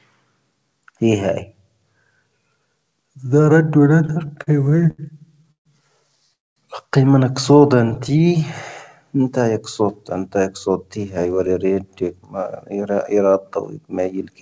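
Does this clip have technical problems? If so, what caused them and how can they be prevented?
Yes. From 3.96 to 5.00 s, packets repeatedly arrived late and the jitter buffer kept running dry, causing repeated stalls (stutter): 13 short fills, the longest 77 ms, drag the sound unevenly. Again from 7.90 to 8.43 s, seven brief fills of up to 13 ms make it catch.

At 5.52 to 5.67 s and 6.33 to 6.58 s, a call audio freeze was likely caused by packets held up in transit. The last sound fades to near silence, inserting gaps of 138 ms and 230 ms before the audio resumes.

From 7.75 to 8.39 s, the buffer ran low and the receiver repeated pitch periods to rebuild its reserve. This jitter buffer slow-down stretches the sound to 93% speed, adding 50 ms at unchanged pitch.

From 10.89 to 14.31 s, a surplus of buffered audio made the receiver trim short pitch-period slices. This jitter buffer speed-up runs about 9% fast, dropping roughly 0.3 s, and sounds hurried.

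Stabilising the network path to reduce packet delay variation, with a jitter buffer sized to that variation, would prevent all of these.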